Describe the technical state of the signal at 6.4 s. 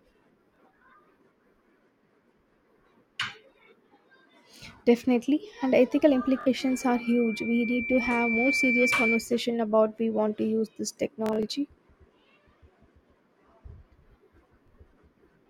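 At 6.41 s, just after "and ethical", the speech breaks into a Bluetooth stutter that lasts until 6.47 s. Packets arrived late or not at all. The receiver filled the gap by replaying its last short buffer. That gives a quick buzzing, machine-gun repetition of a tiny slice of sound. About 46 ms of audio is lost, which fits two dropped packets. The speech then resumes further along, as if it had kept playing.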